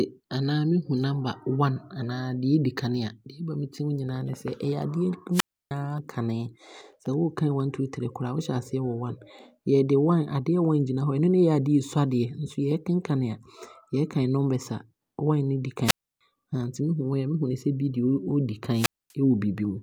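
At 5.32 to 5.71 s, 15.84 to 16.21 s and 18.73 to 19.13 s the speech drops out in a wireless microphone squelch dropout. Each time the radio link from the FM transmitter weakens, hiss briefly rises, and the receiver's squelch mutes its output, leaving near silence for about 310 ms, 300 ms and 240 ms in turn before the signal recovers and the speech returns.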